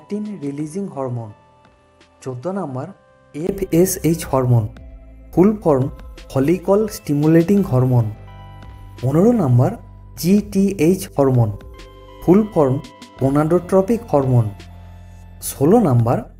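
From the start to 3.49 s the input was likely switched to a poorer device, one passing nothing above 11.4 kHz. The sound is duller and roughly 10 dB quieter over a faint noise floor, until a 20 ms gap at 3.49 s restores fuller sound.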